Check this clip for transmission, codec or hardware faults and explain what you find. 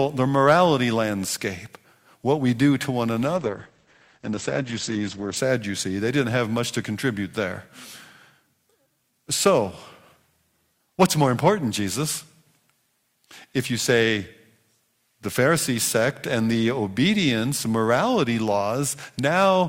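There are two problems here: some hard clipping in a few spots, and a stretch where the stream falls back to a lower bitrate.

Hard clipping shows up at 0.46 to 0.66 s (just before "landscape what we do"), again briefly at 9.46 to 9.49 s, and at 11.01 to 11.49 s. The signal is pushed past what some stage can pass, about 5 dB over in the first two and about 7 dB in the last, so the peaks get sheared flat. Those flat tops throw off high harmonics, and you hear a crackly, gritty edge on the loud bits, roughest around 11 s.

The adaptive stream dropping to a lower bitrate runs from 3.37 to 5.36 s, right after "we do to one." The player switched to a cheaper version of the stream for about two seconds, and the change lands abruptly with no gap. The top end goes dull, with nothing above 8.6 kHz, and the speech picks up more codec artefacts. That's consistent with Opus going from around 64 kbit/s down to around 12 kbit/s and back.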